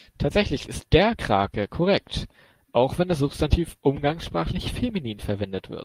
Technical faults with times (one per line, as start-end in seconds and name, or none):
none